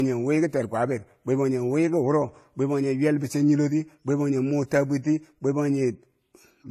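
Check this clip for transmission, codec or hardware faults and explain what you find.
One fault runs through the whole speech clip. The top end sounds dull, with nothing above 14 kHz, and two different kinds of codec grain sit on top of each other. This is likely transcoding between lossy codecs, which fits a 32 kbit/s AAC-LC encode that was later re-encoded as WMA at 96 kbit/s. The second encoder spent its bits reproducing the first one's artefacts and added its own. The earlier, lower cut-off carried through.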